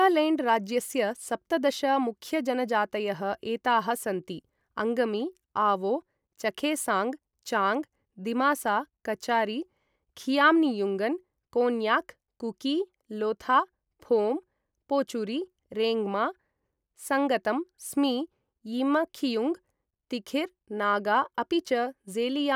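No technical faults can be heard anywhere in the recording.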